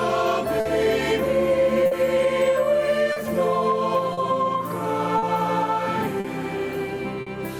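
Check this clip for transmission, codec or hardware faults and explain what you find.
Two related faults run through the clip: clock drift between sender and receiver, and a series of short stalls from late packets.

Clock drift between sender and receiver is present for the whole clip. The sending end's clock runs roughly 4% slow relative to the receiver, so audio arrives a little more slowly than it is played out. The jitter buffer keeps draining and has to be topped up, which produces a steady run of small timing hiccups rather than one clean event. On a waveform this shows as brief irregularities at uneven intervals, and on a spectrogram as faint vertical seams scattered through the clip.

Short stalls from a late packet occur at 0.60, 1.86, 3.12, 4.13, 5.18, 6.20 and 7.21 s. Each time, the buffer runs empty, and the receiver holds the last bit of sound for 40 to 50 ms until the packet turns up, then carries on without skipping anything. 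Each stall sounds like a momentary drag or smear with a faint buzz or dip. A spectrogram shows horizontal streaks where the spectrum freezes, and a waveform shows a short stretch of repeated, periodic cycles.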